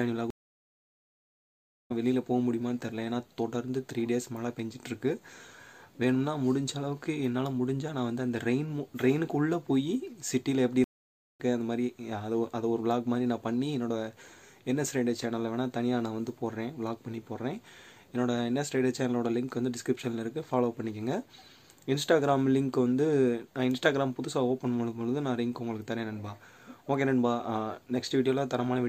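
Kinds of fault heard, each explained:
Stream reconnect: the connection broke and a new decoder restarted mid-stream, leaving silences of about 1.6 s at 0.30 s and 0.55 s at 10.84 s. Unlike a simple dropout, the sound resumes further on, skipping roughly a second and half a second.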